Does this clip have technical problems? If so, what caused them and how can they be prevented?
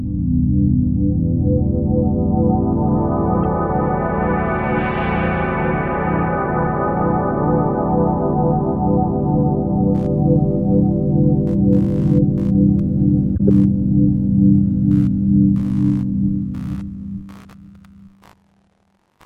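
Yes, two kinds. There's a corrupt frame decoded at 3.43 s, a single brief blip, and again at 13.36 to 13.41 s, a harsher burst spanning roughly three frames. Flipped bits put energy at wrong frequencies. Checksums with concealment or retransmission would prevent it.

There's also computer activity noise from 9.95 s to the end, a faint buzz pulsing around 70 times a second. Processor or graphics load is disturbing the shared audio ground. Better grounding or an external, isolated interface would stop it.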